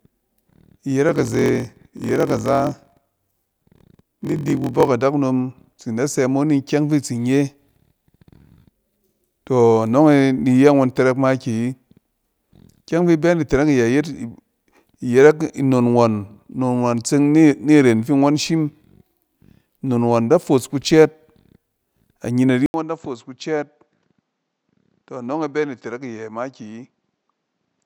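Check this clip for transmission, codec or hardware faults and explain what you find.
Two faults are audible. From 1.07 to 4.89 s there is a block size mismatch (padded): short blocks are zero-filled to fit longer reads, which fits 1024-sample reads. This produces a 43.1 Hz buzz and slows playback to 0.938 times normal speed. At 22.66 s, after an 80 ms silence, the sound turns duller and roughly 10 dB quieter, with a narrower band and a faint new noise floor. The likely cause is the input switching to a poorer device.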